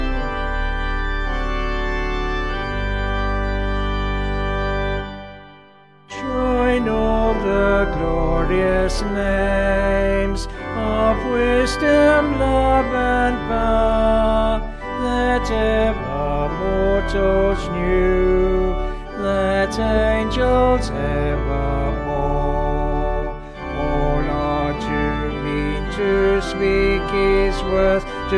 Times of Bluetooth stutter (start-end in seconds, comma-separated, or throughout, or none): none